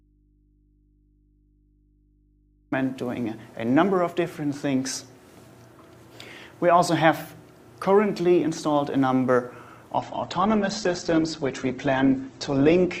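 The audio opens in an audio dropout to a faint residue: until 2.72 s only mains hum remains, roughly 40 dB below the signal, likely a lost feed into a still-live input. From 9.97 s to the end, an adaptive stream at a lower bitrate takes over: nothing is left above 8.2 kHz and codec artefacts rise, which points to an Opus stream falling from about 64 to 12 kbit/s.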